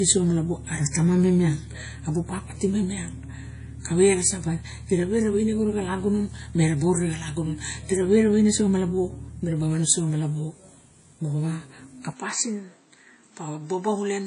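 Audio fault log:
Throughout: WMA compression, likely; plainly audible washy ringing and breathing hiss, nothing above 10.1 kHz, which fits a 32 kbps encode zeroing weak detail.
12.13–14.27 s: input switched to a poorer device, likely; no gap at the switch, band tops out at 8.5 kHz, level drops about 5 dB, new noise floor roughly 40 dB down.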